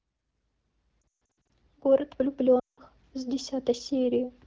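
From 1.01 to 1.50 s the speech stutters and warbles, with sounds briefly dipping toward silence, longest over a gap of about 140 ms. From 2.59 to 2.80 s it drops toward near silence again before returning weak and rough. These are lost AMR speech frames: radio errors corrupted frames, and the AMR wideband decoder filled the gaps by repeating its last good settings at falling gain, covering about 320 ms and then 180 ms of missing audio.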